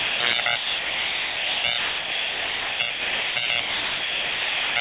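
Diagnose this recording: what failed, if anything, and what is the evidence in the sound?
The level moves throughout the clip, with quieter material and the background rising and falling by roughly 5 dB against each louder sound. This is gain pumping, likely from input gain set too high ahead of a fast limiter or compressor in the sender's capture processing. On a waveform the envelope looks squashed, and the gaps breathe up and down.

The sound is dropped by the voice detector at 0.0–0.2, 0.4–0.46, 0.56–1.64, 1.78–2.8, 2.9–3.36, 3.46–3.5 and 3.6–4.76 s, which is most of the clip. In each span the sound gives way to steady noise or near silence. This happens at the call-processing stage: the sender's detector likely took the sound for background and stopped transmitting, and the receiver filled the gaps with comfort noise. On a spectrogram these spans show as flat, featureless noise in place of the sound's structure. 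Everything stops at 4 kHz, which is expected for the G.711 mu-law call path.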